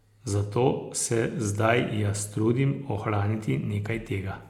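No technical faults can be heard anywhere in the speech.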